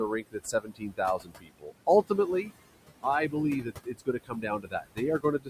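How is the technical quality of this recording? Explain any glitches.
The recording is hurt by heavy noise suppression that runs through the whole clip and repeatedly eats into the speech itself.

Noise suppressor artifacts, throughout: the suppressor pulls down whatever bands it judges to be steady noise, by about 20 dB, recalculating every frame. Because the room noise sits only about 12 dB under the speech, that cut is aggressive. The background dips in the gaps and swells back beneath the talking.

Speech cut by the noise suppressor, from 0.08 to 1.0 s, 1.18 to 1.88 s, 3.63 to 5.0 s and 5.19 s to the end: here the suppressor mistakes parts of the speech for noise and drags them down with the background, by about 19 to 22 dB at the deepest points. Roughly half a second is lost in each of the first two spans, a bit more in the third and a short stretch in the last. Those moments sound swallowed and faint, as though the talker briefly drops away.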